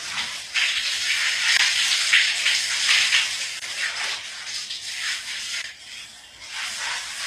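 Likely HE-AAC compression throughout, its damage plainly audible, with treble rebuilt by band replication rather than coded, consistent with about 24 kbps. High detail sounds gritty and metallic, with nothing above 14.9 kHz. Audio delivered in 2-second chunks leaves a gap between chunks at 1.57–1.60 s, 3.60–3.62 s and 5.62–5.64 s, each a 23 ms hole.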